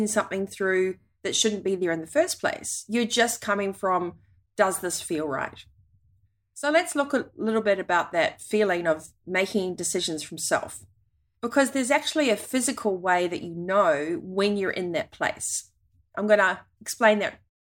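Nothing in this speech clip stands out as a problem, and it simply eases away with a gentle fade-out right at the very end, around 17.5 s.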